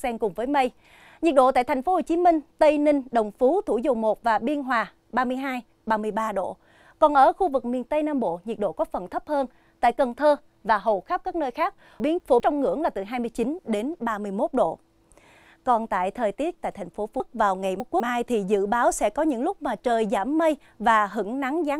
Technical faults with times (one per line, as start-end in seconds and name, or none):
12.00-12.40 chunks out of order
17.20-18.00 chunks out of order